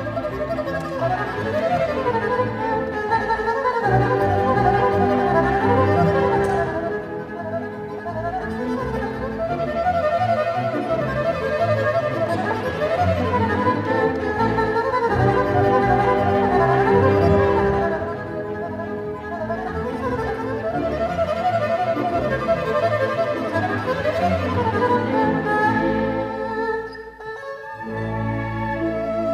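No technical faults can be heard anywhere in the recording; the signal holds steady throughout.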